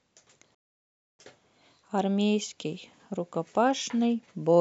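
At 0.55 s the speech cuts to silence until 1.19 s, a playback stall of about 0.64 s, likely from the player running out of buffered data.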